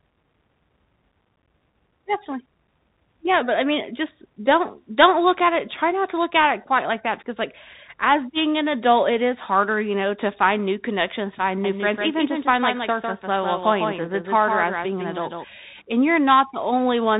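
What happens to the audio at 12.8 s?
A doubled audio track runs from 11.64 to 15.44 s, so 12.8 s falls inside it. A second copy of the same full-band sound trails the original by around 150 ms, roughly 5 dB quieter, with no decay or room colour. It starts and stops abruptly, most likely from a slower second capture path or an edit leaving two misaligned copies.

Bluetooth CVSD headset codec damage is also present here, as it is throughout. Nothing above about 3.8 kHz survives, s sounds are scratchy, and a granular hiss sits underneath, which fits the 64 kbps one-bit-per-sample stream whose adaptive step lags behind loud, fast-changing sound.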